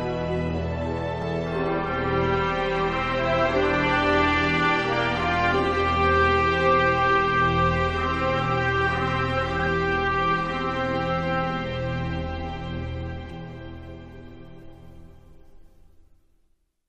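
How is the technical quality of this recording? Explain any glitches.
The recording has three short glitches: one repeated buffer near the start and two places where compressed frames were skipped.

At 1.22 s there is a click, the sign of a repeated buffer. New audio did not reach the playback device in time, so it replayed the chunk it already held once more before continuing. The repeated slice is very short, which fits a buffer of about 5 ms, so it registers as a click rather than an audible stutter. No audio goes missing there; the sound is briefly doubled, not cut.

From 9.58 to 9.67 s, and again at 13.30 s, the audio skips forward. These are compressed frames skipped: whole frames of the encoded stream were not played, either because they were absent from the file or because the decoder rejected them as corrupt. Each time roughly 50 ms of material disappears.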